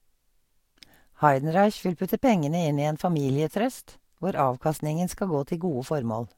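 No technical faults can be heard anywhere in this speech recording.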